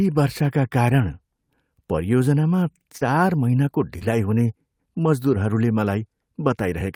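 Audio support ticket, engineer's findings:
Short concealed packet loss, 2.97–3.03 s and 3.99–4.03 s: brief smear, about 40 ms then 20 ms. Receiver concealment extended the preceding sound over the missing audio before blending back.

Lost packet rebuilt from error correction, 3.01–3.03 s and 4.01–4.03 s: 20 ms of rougher, noisier audio each, fitting one packet decoded from a low-bitrate in-band redundant copy.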